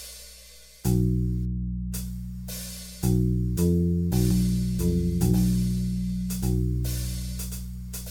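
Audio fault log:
4.31 to end: doubled audio track. From 4.31 s the music gains a second, identical full-band copy trailing about one second behind and roughly 5 dB quieter, most likely from a second capture path or an edit holding two copies out of step. It cuts in abruptly and persists to the end. Unlike reverb or a room echo, the copy neither decays nor takes on room colour, and it repeats once rather than building into a train of echoes.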